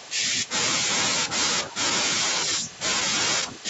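Right at the start, from 0.00 to 0.26 s, there's a faint repeat of the speech trailing it by about 0.39 s and sitting well below it. That's an echo leak, most likely a far-end echo canceller letting some loudspeaker pickup slip back into the call.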